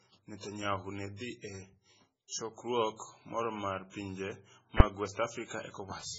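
MP3 compression runs through the whole speech clip, and the damage is heavy. The sound is watery and swirly, consistent with likely MP3 coding at a very low bitrate, around 16 kbps. Starved of bits, the encoder drops weaker frequency lines, so they flicker on and off between frames and leave a shifting, metallic texture on s sounds. The treble is cut hard, with nothing above 7.6 kHz, which dulls the speech.

Pre-echo appears from 2.27 to 2.32 s, a 46 ms smear of hiss before a sharp onset. A transform codec spreads its quantisation error across an entire block. When an attack lands late in that block, noise scaled for the loud part also fills the quiet moment before it. The result is a short hiss ahead of the attack, which itself sounds softened rather than crisp.

Invalid numbers at full scale strike at 4.80 s, lasting about 5.8 ms, which fits a 256-sample block. A calculation produced infinite or invalid values, and these were forced to the largest possible value, so the output jumps to one extreme far beyond the speech and stays flat for the block. 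Because the block is so short, it is heard as a single loud bang instead of two separate pops.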